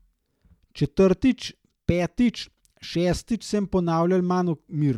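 No technical faults can be heard anywhere in the speech.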